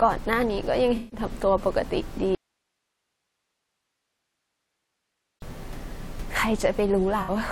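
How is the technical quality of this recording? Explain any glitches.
The recording has two kinds of glitch: brief AAC frame losses that the decoder patched over, and one long dropout. Room noise sits about 17 dB below the speech and belongs to the recording itself.

From 0.96 to 1.19 s and from 7.21 to 7.30 s, AAC frame loss with concealment produces smeared, phasey patches. The decoder rebuilt missing frames from the last good spectrum. The first patch is about 150 ms, which fits seven lost frames, and the second is 64 ms, which fits three. Unlike a dropout, the sound keeps going in altered form.

From 2.35 to 5.42 s, the speech cuts abruptly to hiss about 55 dB down for roughly 3.1 s, then returns mid-flow. This is an audio dropout to a faint residue, likely a lost input while the downstream path stayed live. The hard edges and hiss floor distinguish it from a pause or a concealment fade.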